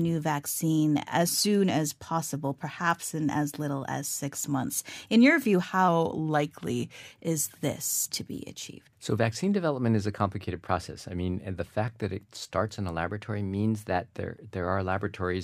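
Speech, where a drift correction step likely shifts the playback rate: 6.2% slower and about a semitone flat at 5.88–7.11 s, then 6.2% faster and about a semitone sharp at 13.08–14.10 s, each snapping back.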